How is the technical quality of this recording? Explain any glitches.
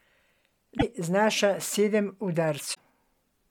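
The recording has two short glitches, both from damaged data in a compressed stream. The first runs from 0.75 to 0.83 s, just before "znaša sedem", and the second from 2.73 to 2.80 s. Corrupted bytes made the decoder misread frames and lose sync until it found the next header. Each glitch is a brief chirp, squawk, click or short hole.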